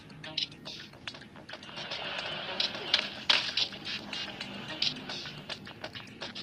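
No technical fault can be heard anywhere in this clip. There is nothing to mark at any point in time.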